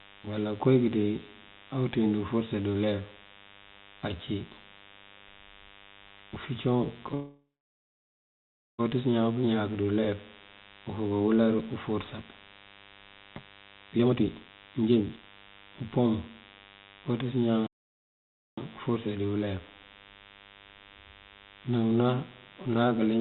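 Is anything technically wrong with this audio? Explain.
Yes. This speech clip, which is band-limited to nothing above 4 kHz as on a narrowband call line, has four distinct problems.

A DECT cordless phone buzz runs through the whole clip: a thin, steady buzz at 100 Hz with a dense stack of harmonics, sitting roughly 25 dB below the speech. It comes from a nearby DECT handset or base station transmitting a short radio burst every 10 ms. The audio circuitry rectifies each burst, turning the radio pulses into an audible tone at the burst rate.

From 7.14 to 8.81 s there is a call audio freeze. The last sound is drawn out and fades, then the line goes silent for about 1.36 s before the speech resumes exactly where it stopped. About 1.65 s of time is inserted, and nothing is lost. The likely cause is packets held up in transit, so the jitter buffer ran dry and the receiver stretched the final sound until data arrived.

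Between 13.49 and 16.42 s the speech suddenly sounds hurried, running at about 156% of normal speed while its pitch stays unchanged. This is a jitter buffer speed-up. After a backlog built up, the receiver trimmed its excess delay by repeatedly cutting out short slices one or a few pitch periods long. About a second and a half of audio disappears this way.

At 17.67 s the sound cuts out abruptly mid-flow and stays silent for 0.91 s before continuing, which is a playback stall. Unlike the freeze, there is no trailing buzz, just a clean dropout to silence. The likely cause is the player running out of data or having its audio thread blocked, so the output simply had nothing to play until it recovered.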